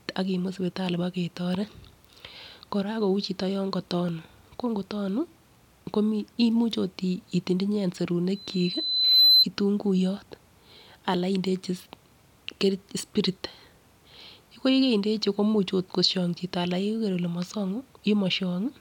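From 8.35 to 9.46 s, loudspeaker feedback squeal cuts across the speech. A microphone picks up its own loudspeaker, and the loop gain passes one at 4 kHz. That tone swells for about a second into a piercing squeal, roughly 10 dB above the speech.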